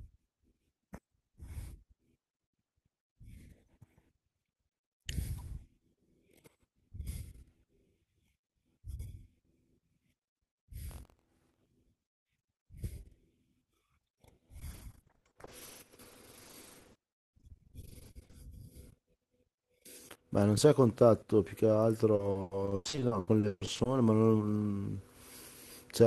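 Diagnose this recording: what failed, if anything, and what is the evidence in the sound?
Buffer tearing at the driver/buffer stage, 10.87 to 11.68 s: a steady 43.1 Hz rattle rides on the speech, which fits a 1024-sample buffer. A small slice of each period, roughly 70 ms stale, is spliced in, so the spectrogram shows evenly spaced vertical clicks.

Repeated packet loss (robotic sound) in the network and jitter-buffer stage, at 14.59 to 18.35 s and 22.15 to 23.87 s. Gaps up to 40 ms, then up to 140 ms, are filled by stretching prior sound. Concealment covers about 38% and 45% of these spans, showing as smeared, frozen harmonic bands and repeated waveform cycles.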